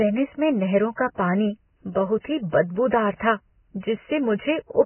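From start to finish the speech is cut off above 3 kHz, and the band beneath is hissy and grainy, with rough vowels and smeared consonant onsets. The likely cause is heavy Vorbis compression at a very low bitrate, around 10 kbps. The encoder kept only a smooth spectral outline and quantised the detail on top so coarsely that it turned into noise of similar energy. A plain low-pass filter would sound muffled but clean, without this hiss.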